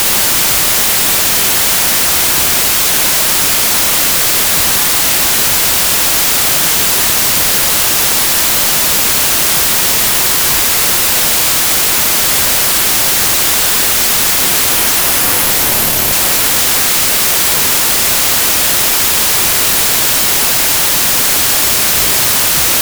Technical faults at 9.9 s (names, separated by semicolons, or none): wrong sample width